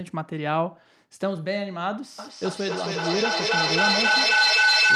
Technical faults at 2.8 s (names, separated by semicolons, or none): feedback howl